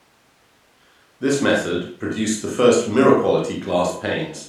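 Nothing stood out as a fault anywhere in this recording when listening through it.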